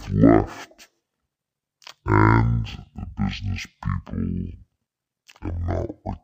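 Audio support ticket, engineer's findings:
Stereo read as mono, whole clip: speech at half speed, an octave low. Interleaved L/R samples read sequentially as one channel; mirrored spectral image in upper band rules out plain sample-rate mismatch.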